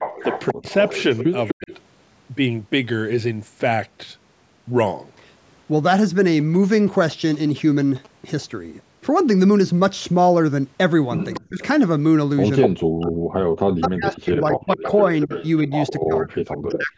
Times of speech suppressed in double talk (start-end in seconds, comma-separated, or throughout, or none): 0.50-1.72, 11.40-11.63, 12.67-16.98